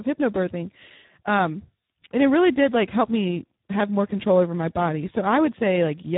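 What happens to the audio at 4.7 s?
At 4.7 s you're hearing the same Speex codec damage that runs through the whole clip, start to finish. The speech sounds hoarse, grainy and a bit robotic, because a CELP coder this starved has too few bits to rebuild the excitation properly. It's also dull, with nothing above about 3.8 kHz, and that heavy degradation points to a low setting around 8 kbps.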